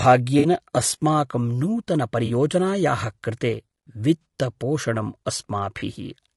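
Throughout, the speech carries rough, grainy coloration with noise between harmonics and a thin top band, likely from low-delay AAC compression at a low bitrate around 32 kbps. At 0.39, 2.25 and 4.22 s, AAC frame loss with concealment leaves the decoder rebuilding about 40 ms from the last good spectrum, heard as brief smeared, noisy patches; at 5.79 s a shorter 20 ms gap does the same.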